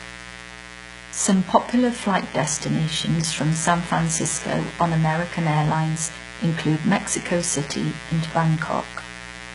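A mains buzz runs under the speech from start to finish. Sharp switching spikes, twice per 60 Hz cycle, leak into the signal. Their harmonics climb well into the kilohertz range. The result is a steady, raspy buzz, roughly 15 dB below the speech.

Heavy codec damage also lasts the whole clip. Nothing survives above 11.1 kHz. The treble sounds rebuilt rather than recorded, with gritty, metallic s sounds. This is likely HE-AAC compression, and it fits a very low bitrate near 12 kbps.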